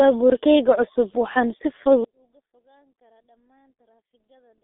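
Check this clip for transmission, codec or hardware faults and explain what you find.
Two faults are audible: a low-rate codec across the whole clip, and a near-total collapse of the sound in the second half.

G.723.1 codec, throughout: the speech passes through a 300 Hz to 3.6 kHz telephone band with nothing above 3.8 kHz, and the heavy damage fits a rate near 6 kbit/s. Coarse 30 ms frames and a slowly updated voice model leave it muffled and hoarse, with smeared consonants.

One channel inverted, from 2.04 s to the end: the level drops by about 41 dB, which is most likely one stereo channel with reversed polarity cancelling its twin when summed to mono. Since the centred speech is common to both channels, only a faint residue remains.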